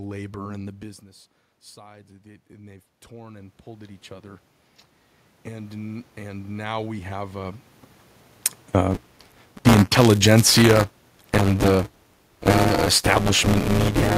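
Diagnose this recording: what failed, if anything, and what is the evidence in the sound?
Right after "labor and the business", from 1.74 to 4.51 s, the voice and the room noise swell together over nearly three seconds, about 10 dB in all. The input had dropped by about 16 dB, and the automatic gain rising in the call-processing stage slowly pushed its gain up to compensate. A second, similar rise of about 8 dB runs from 5.46 to 7.62 s. The background climbing in step with the voice shows this is gain applied by the processing, not a talker moving closer.

From 8.90 s to the end of the clip, a steady robotic buzz of about 188 Hz rides on the voice and is present only while there is signal. This is buffer tearing at the driver or buffer stage, and the rate fits a 256-sample buffer. The writing and reading positions have slipped, so a large share of each period, about 40 percent, plays audio from about one lap, roughly 10 ms, earlier. 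Hard joins on both sides of that stale section produce the rattle.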